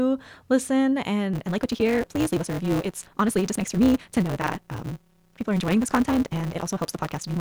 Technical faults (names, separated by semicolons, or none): block size mismatch (truncated)